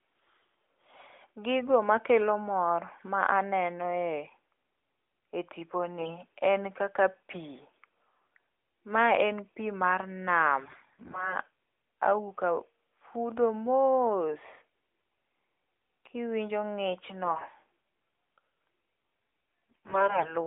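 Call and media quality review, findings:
Hoarse, scratchy, gargly bursts at 6.00–6.16 s, 10.60–11.38 s, 17.24–17.48 s and 19.70–20.36 s, pitch and level held. AMR bit errors: flipped weakly protected bits (around one in ten, worse at the end) misplace excitation pulses in the narrowband AMR decoder.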